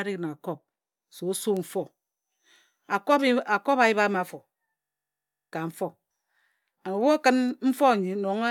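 At 4.80 s the speech locks into a system hang loop that runs until 5.53 s. The host or driver has stalled while the audio hardware keeps replaying the same ring buffer, so one 21.33 ms slice repeats 34 times. That length fits a 1024-sample buffer. Because the loop is so short, it comes across as a steady buzz at 46.9 Hz rather than a stutter. Roughly 0.7 s of the real speech is lost.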